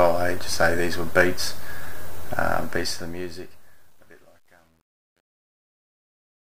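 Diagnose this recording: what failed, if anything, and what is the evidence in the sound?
Truncation distortion on the fade-out: from 2.58 s it turns gritty, at its worst from 3.44 s on. An undithered sample-format stage, consistent with roughly 10 bits, is stair-stepping the tail.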